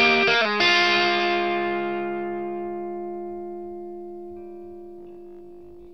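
From 4.99 to 5.93 s, robotic sound from repeated short buffers. A 50 Hz buzz is imposed on the audio. About half is likely repeated 20 ms buffers.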